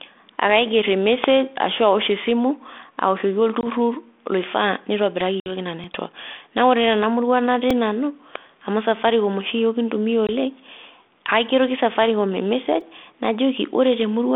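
At 1.24 s, just before "ashu awosh esimu awoshoki", an electrical switching spike cuts through the speech as a dry snap lasting about 2 ms. Similar snaps follow at 5.21 s and at 8.36 s, the last just before "amu safaricom oshi yiook". These most likely come from a nearby switch or static discharge arcing into the line. Each one sits on top of the speech without removing any of it, which separates these spikes from the dropouts.

From 3.61 to 3.67 s, after "ashu awosh esimu awoshoki", there is packet loss on an ADPCM call. About 20 ms of audio, a couple of packets, falls to hard-edged silence. When the speech resumes, the decoder's predictor and step size no longer match the sender's, so the sound comes back slightly distorted and settles within tens of milliseconds. The worst gap runs from 5.40 to 5.56 s and removes about 60 ms. A shorter one follows from 10.27 to 10.30 s. The uneven recovery after the gap is what separates this from a simple mute. 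It is heard through the G.726 telephone band of 250 Hz to 3.5 kHz.

A repeated buffer appears at 5.84 s, at 7.70 s and from 12.81 to 12.82 s. Each time the device replayed its last slice of audio, once, twice and then four extra times. The slices are very short, which fits a 128-sample buffer. Nothing is lost and no gap opens. Each repeat comes out as a click or a brief buzz rather than an audible stutter.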